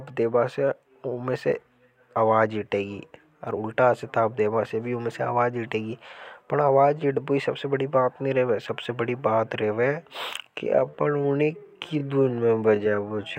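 A speech clip with a time-stretched section running from 10.39 s to the end. The pace suddenly drops to about 0.64 times normal while the pitch holds, so it drags, likely from software repeating short slices to pad it to length.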